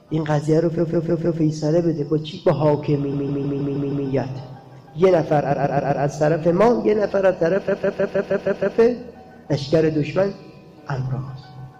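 The audio has four stretches of repeated frames, where a short block of compressed audio is decoded again and again so the sound stutters in place. At 0.77 to 1.40 s, a 157 ms block plays four extra times. At 3.12 to 4.06 s, the same 157 ms length repeats six extra times. At 5.50 to 6.02 s, a 131 ms block repeats four extra times. At 7.67 to 8.77 s, a 157 ms block repeats seven extra times. Together these add about 3.2 s. The block lengths fit a run of five or six codec frames being written or sent more than once. Unlike a buffer underrun, there is no gap or silence between repeats. Each loop is a complete, identical copy, and the sound then carries on from where it left off.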